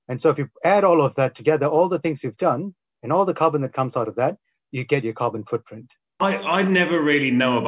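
Nothing in the audio stood out as a technical fault on listening.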